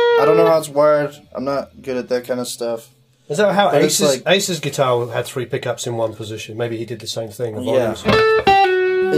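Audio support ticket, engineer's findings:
No faults found in the audio; nothing to report for this ticket.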